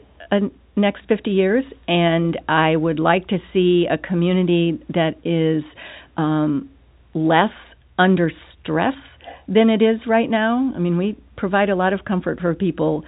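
At 9.22 to 9.45 s, an echo leak: a quiet copy of the speech returns 328 ms late, likely loudspeaker pickup the far-end echo canceller missed.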